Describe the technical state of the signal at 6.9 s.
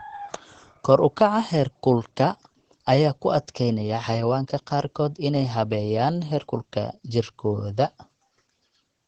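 At 6.9 s the speech carries Opus voice compression, present across the whole clip rather than at this moment alone. Nothing is heard above 8.5 kHz, which points to the SILK linear-prediction coder running in wideband at a low rate around 12 kbps. The excitation is coded coarsely, so the speech sounds plainly muffled, hoarse and slightly robotic, with codec damage clearly audible at this point.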